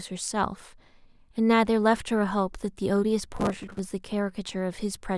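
From 3.37 s to 3.79 s the speech breaks into processor overload crackle, a gritty tearing that stops cleanly once the load passes. The processor keeps missing its deadlines for buffers of roughly 5 ms, around forty times over the stretch. Each miss repeats a scrap of stale audio with hard edges. On the waveform the stretch shows step-like jumps every few milliseconds. On a spectrogram it shows as a dense run of thin vertical broadband streaks.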